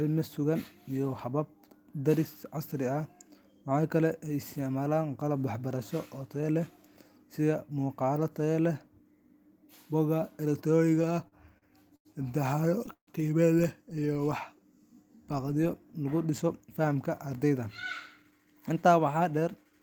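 Repeated stalls (stutter), 10.95 to 12.07 s: packets arrived late six times and the buffer kept running dry. About 196 ms of continued sound, with the longest gap 92 ms, makes the speech drag and stutter.

Call audio freeze, 12.93 to 13.09 s: the last sound is held, then fades to about 110 ms of silence. This is likely a late packet burst that emptied the buffer, adding a 143 ms gap.

Jitter buffer slow-down, 14.00 to 14.61 s: the receiver repeated single pitch periods to rebuild its reserve, adding 48 ms. Speech runs at 93% speed at unchanged pitch, with drawn-out sounds.

Jitter buffer speed-up, 16.47 to 18.71 s, just after "lagu dhiso": the receiver cut short pitch-period pieces, about a fifth of a second in all, to shed excess delay. Speech runs at 108% speed and sounds hurried.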